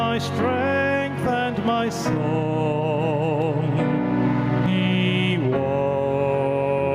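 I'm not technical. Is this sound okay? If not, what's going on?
No. Throughout, loud and soft parts end up closer in level, so the sound feels squashed. This is gain pumping, likely from the level being set far too high and a fast limiter repeatedly pulling it back down.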